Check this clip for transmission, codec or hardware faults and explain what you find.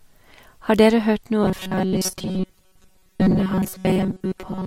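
One fault: robotic sound from repeated short buffers, from 1.43 s to the end at 4.66 s. New audio likely arrived too seldom, so playback kept repeating a stretch of about 5.3 ms in place of most of the real signal. This imposes a rigid, metallic 188 Hz buzz on the speech.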